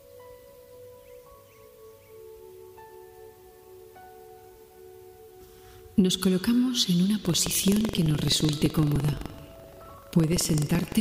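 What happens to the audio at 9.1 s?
A low, robotic rattle at about 23.4 Hz runs through the sound, part of buffer tearing that starts at 7.21 s and lasts to the end. Writer and reader have slipped, so a small slice of each 2048-sample period replays audio roughly 150 ms old, with hard joins on both sides.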